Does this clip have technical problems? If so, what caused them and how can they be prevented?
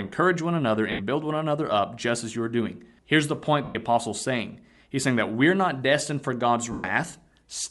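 Yes. Throughout the speech, a grainy, breathy edge on the upper frequencies likely comes from Bluetooth LC3 compression, which thins and noise-fills the top band at a rate that fits about 48 kbps. A higher LC3 bitrate setting prevents this.

Lost LE Audio frames at 0.92 to 1.01 s, 3.64 to 3.75 s and 6.72 to 6.84 s (gaps of 70, 110 and 120 ms) make the decoder repeat the last spectrum as a noisy smear that fades toward silence. A stronger link with less range, fewer obstructions or less radio interference prevents these dropouts.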